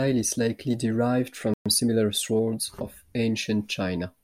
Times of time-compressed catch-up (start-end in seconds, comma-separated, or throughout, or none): 1.66-2.46